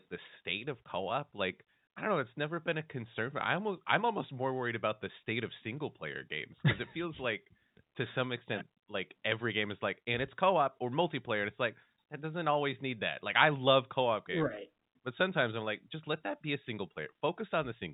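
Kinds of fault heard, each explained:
No faults can be heard in this speech. It comes through the G.711 telephone coding path, so nothing above about 4 kHz passes, and a faint low-level quantisation hiss rises and falls with the speech.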